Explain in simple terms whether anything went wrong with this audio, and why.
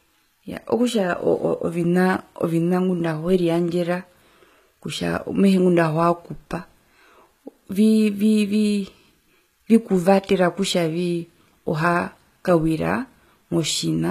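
The speech sounds plainly damaged the whole way through, with gritty, lispy s sounds and a top end that stops around 14.9 kHz. That's most likely HE-AAC compression, which fakes the treble by copying lower frequencies upward, so the brightness doesn't quite match the voice.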